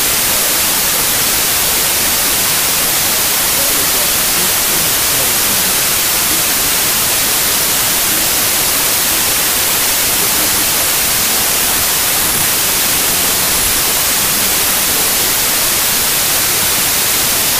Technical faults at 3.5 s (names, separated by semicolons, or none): wrong sample width